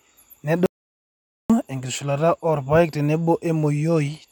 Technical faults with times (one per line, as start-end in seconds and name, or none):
0.66-1.50 audio dropout to silence